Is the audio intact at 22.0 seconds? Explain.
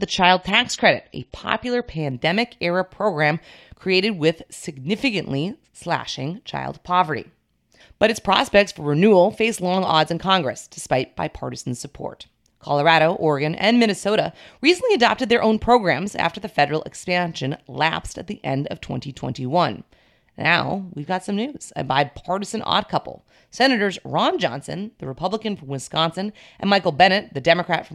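Yes, at 22.0 seconds the speech runs through intact with no audible fault.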